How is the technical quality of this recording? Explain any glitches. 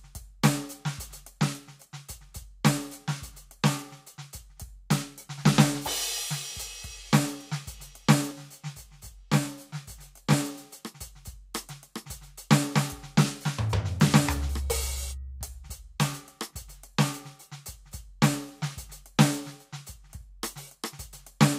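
One glitch stands out in this music recording. Channel delay (comb filtering), 8.31 to 10.33 s: one channel lags around 20 ms, and mono summing carves evenly spaced notches from roughly 30 Hz, sounding rough or slightly doubled.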